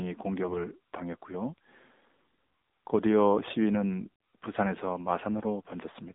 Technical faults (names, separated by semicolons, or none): AMR narrowband mobile codec; AMR bit errors